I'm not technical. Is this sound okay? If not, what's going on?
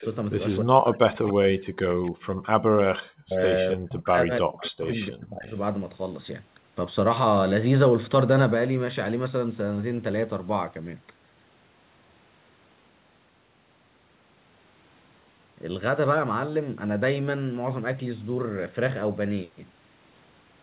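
No. There are three problems.

Echo leak: a faint, delayed copy of the speech returns about 0.29 s late, at 0.0–0.05, 1.25–1.3, 3.7–3.74 and 4.59–5.11 s. It likely comes from the other side's loudspeaker.

Speech suppressed in double talk: from 0.62 to 2.28 s and 3.0 to 5.54 s, the speech drops away in pieces, likely because both sides talked at once.

Background gated by the echo canceller: at 2.56–2.72 s the room sound briefly cuts out almost completely, then returns.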